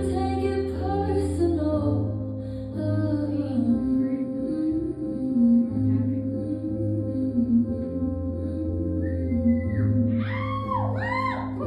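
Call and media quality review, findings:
No faults found; nothing to action.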